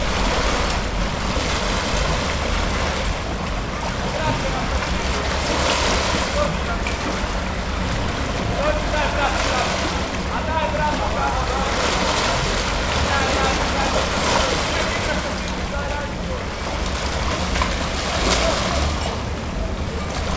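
No technical faults can be heard in these sounds.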